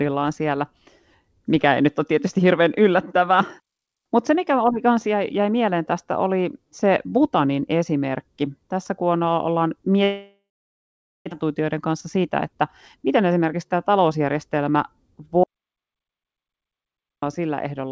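At 10.04 s the audio hits a long network dropout, most likely packets that stopped arriving for a while. The receiver tries to cover the gap by stretching the last bit of sound into a buzzy tail that fades out, then there's about 0.79 s of near-silence before things pick back up at 11.34 s. Around a second of material never shows up at all, and the stream comes back with roughly a fifth of a second more delay than before.

That extra delay gets worked off right away with two stretches of jitter buffer speed-up: 11.43 to 12.56 s, running at 109%, then 12.97 to 14.35 s at 108%. The receiver snips out tiny pitch-period-sized slices over and over, so the pitch stays put but the delivery sounds a little rushed. Each pass trims about a tenth of a second.

Then from 15.44 to 17.22 s there's an audio dropout to silence, likely the input going missing while the recording kept writing silence. The sound cuts off abruptly and leaves about 1.79 s of dead digital silence, with no room tone at all, before it returns. 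Whatever happened in that gap is simply gone. Under all of this you can hear the G.722 call codec at work: nothing comes through above 8 kHz, which fits its 64 kbps mode.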